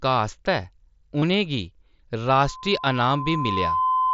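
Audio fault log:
1.20–1.22 s, concealed Bluetooth headset packet loss: A run of about 22.5 ms of speech failed to arrive from the headset, which fits three consecutive lost frames. The receiver filled the hole by repeating the best-matching stretch of the preceding waveform, so instead of silence there is a brief buzzy, held tone at full level. A small warble follows where the real signal resumes and the repeated segment no longer lines up with it.
2.33 s to end, loudspeaker feedback squeal: A single 1 kHz tone appears and swells over roughly a second and a half until it sits at about the same level as the speech, then persists to the end of the clip. The microphone is hearing the loudspeaker it drives, and at 1 kHz the loop gain exceeds one, so that frequency regenerates on each pass. The wideband mSBC headset path carries the tone because 1 kHz is well inside its 8 kHz bandwidth.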